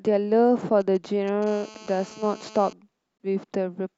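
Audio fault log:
0.81–1.44 s GSM signalling bursts: a galloping dit-dit-dit of short 217 Hz buzzes, roughly 25 dB below the speech. A nearby 2G phone exchanging signalling sends grouped radio bursts, which the audio circuit rectifies into these buzzes.
1.47–2.73 s GSM phone buzz: a hard, raspy, harmonic-rich buzz at 217 Hz, about 22 dB below the speech and unrelated to it. A 2G phone in a call transmits steadily at that burst rate, and the rectified pulses form this tone.
3.20 s Bluetooth dropout: a brief hole, after which the sound resumes as if it had kept playing, with about 21.3 ms of audio missing. The likely cause is an audio packet reaching the headphones too late and being discarded.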